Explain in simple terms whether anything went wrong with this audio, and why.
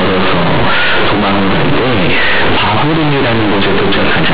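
Something did go wrong, and it lasts the whole clip: companded audio read as linear. This speech was stored in the mu-law telephone format, which squeezes loudness onto a curved scale, but the player treated each byte as an ordinary 8-bit sample and never unsqueezed it. Quiet moments come out as loud as the strong parts, and the waveform gets bent, so you hear harsh, buzzing distortion throughout and heavy noise in the pauses, even though the telephone coding itself is intact.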